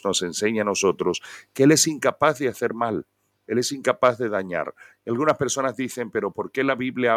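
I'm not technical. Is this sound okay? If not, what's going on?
No. At 2.04 seconds there's a microphone volume stepped down: the call software likely lowered the microphone's input level in a single step, so the speech and the background noise both drop suddenly to a quieter level from that moment on.

There is also microphone overload. The microphone's input was likely set too high, so the loudest moments went past what it could record and their tops were cut off. This sounds like a harsh, crackly edge at 2.08 to 2.28 seconds, and in rougher short bursts at 4.04 to 4.08 and 5.28 to 5.31 seconds.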